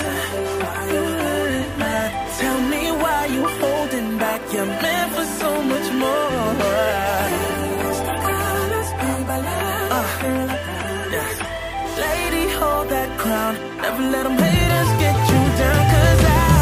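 No technical faults are audible.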